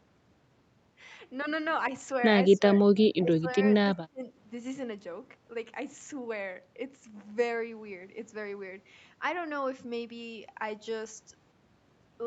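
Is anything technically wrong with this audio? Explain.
Yes. The speech briefly dips in level three times, from 2.56 to 2.63 s, from 3.17 to 3.49 s and from 3.95 to 4.33 s, most likely speech suppressed in double talk. When both ends talk at once, an echo canceller can mistake the near talker for loudspeaker echo and turn everything down. Here the cuts deepen over time, about 15 dB, then about 20 dB, then about 30 dB, so the speech drops further each time and finally nearly vanishes for a few hundred milliseconds. The audio stops at 8 kHz, which fits an Opus call path.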